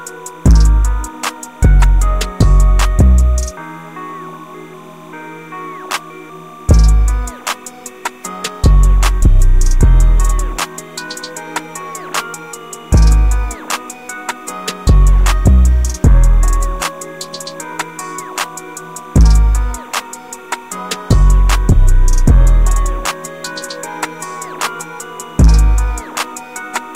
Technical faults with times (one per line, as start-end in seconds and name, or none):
0.00-26.95 timecode bleed
0.00-26.95 low bit depth without dither